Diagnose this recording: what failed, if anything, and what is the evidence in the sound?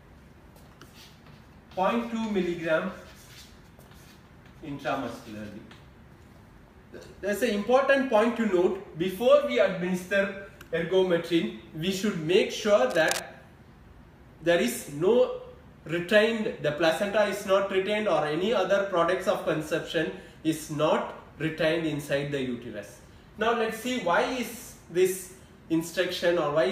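A burst of dense, uneven scratching rides over the sound from 12.9 to 13.23 s, roughly 10 dB below it. This is cable scratch noise in the analogue wiring, likely from a worn cable or connector being moved so its contact resistance flickered.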